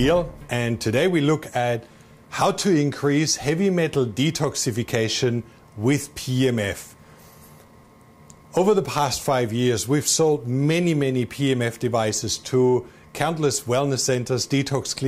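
No technical faults can be heard anywhere in the recording; the signal stays continuous and intact throughout.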